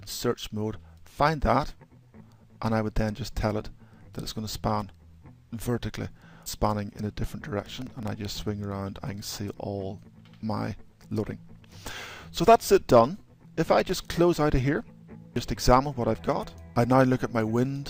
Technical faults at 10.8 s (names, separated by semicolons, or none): none